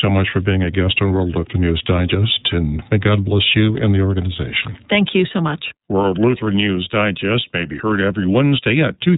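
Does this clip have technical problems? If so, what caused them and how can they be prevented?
Yes. Throughout the speech, the signal passed through the iLBC codec, a narrowband VoIP coder that encodes each frame's excitation independently of the previous frame. The texture suggests 30 ms frames, consistent with its 13.33 kbps mode. Nothing above about 3.8 kHz survives, so the speech sounds muffled and telephone-like, and the coding damage is plainly audible as a rough, slightly synthetic graininess. To prevent this, carry or record the call with a wideband or full-band codec at a higher bitrate instead of iLBC.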